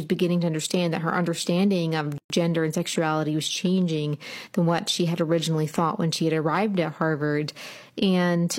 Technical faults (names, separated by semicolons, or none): gap at a join of encoded pieces